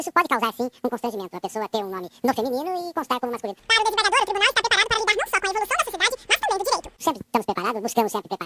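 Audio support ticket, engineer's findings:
Wrong sample rate, whole clip. Sound runs at double speed, pitched up a full octave (12 semitones). Playback clock mismatch, no resampling stage. The 2.0 ratio fits 16 kHz material being clocked out at 32 kHz. Check output rate negotiation.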